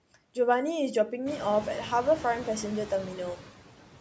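From the start to the end of the speech, noise suppressor artifacts are present. The suppressor judges which bands hold steady noise and pulls them down frame by frame, by about 12 dB. The background dips between words and surges back beneath them. The room noise rises at around 1.5 s.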